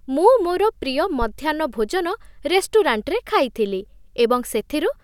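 A phantom power thump lands at 1.22 to 1.30 s in this speech clip: a supply voltage switched on a live input sends a DC step through the coupling capacitors, heard as a short, deep thud whose tail dies away in about 17 ms.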